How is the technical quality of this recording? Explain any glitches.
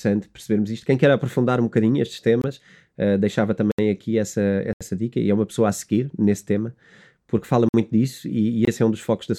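The speech has five dropouts, each a block of digital silence: at 2.42 s after "aprofundar um bocadinho estes", at 3.72 s after "uh deixava", at 4.73 s, at 7.69 s, and at 8.65 s after "disso e". They last about 23 to 77 ms. The output buffer likely wasn't filled in time, so the sound cut out abruptly, giving a short hole. The two 23 ms gaps fit a 1024-sample buffer.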